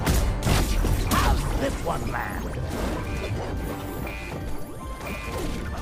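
From 3.19 s to 5.18 s there are periodic USB or driver dropouts: about a millisecond skipped roughly once a second, giving a few regular ticks.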